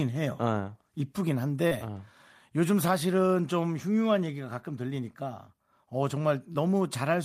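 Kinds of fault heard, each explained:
Short concealed packet loss: twice in this speech, at 1.67 to 1.73 s and 6.53 to 6.57 s, about 40 ms and then 20 ms of audio failed to arrive in time, and the receiver papered over the gaps by extending the preceding sound before fading back into the real signal. Each shows as a brief smear. A spectrogram shows smoothed, repeated or blurred harmonics across those spans, and the waveform shows a soft seam where it rejoins.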